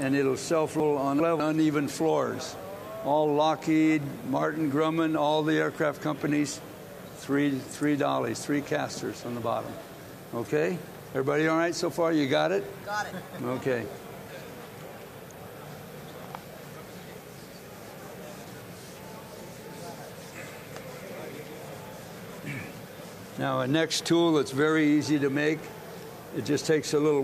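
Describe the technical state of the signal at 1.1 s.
At 1.1 s the signal sits inside a chunks-out-of-order fault spanning 0.8 to 1.4 s. One 200 ms chunk arrived two chunks late and plays after the two that should follow it, so the passage sounds jumbled, with three hard joins.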